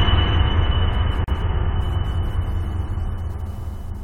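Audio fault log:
1.24 s, gap at a join of encoded pieces: the music drops out for about 37 ms and resumes where it stopped, with its edges smeared. Two separately encoded pieces were joined untrimmed, so one's padded final frame and the next one's start-up delay both remain as silence.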